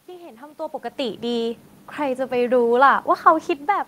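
Nothing in the system misbehaves here; the noise of the room sits underneath throughout, and the level shifts early on and again near the end simply because the talker moves relative to the microphone.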